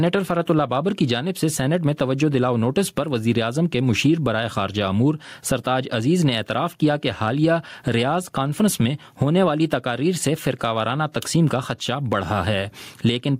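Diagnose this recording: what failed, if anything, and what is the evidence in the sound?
Gain pumping runs through the whole recording. The gain swings by around 15 dB, and loud and soft passages sit squashed close together. The likely cause is input gain set far too high, with a fast limiter or compressor at the capture and processing stage clamping each peak.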